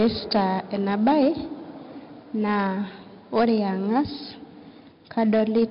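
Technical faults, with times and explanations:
Throughout: 4-bit ADPCM compression. Heavy codec damage. A gritty hiss rides on every loud stretch of the speech and rises and falls with its level, because each sample is stored as a coarse 4-bit step from a prediction. Sharp onsets smear where the adaptive step cannot grow fast enough. Nothing is heard above about 5.3 kHz, so the sound is dull. This fits a low sample rate and a bitrate around 44 kbps.
1.07–1.28 s, 3.36–3.55 s, 5.18–5.64 s: hard clipping. In each of these stretches the peaks are driven past what the signal path can carry and are cut flat. The overdrive is about 6 dB in the first, about 4 dB in the second and about 3 dB in the last. The flattened tops add harmonics high in the spectrum, heard as crackle on the peaks. It is strongest in the first stretch.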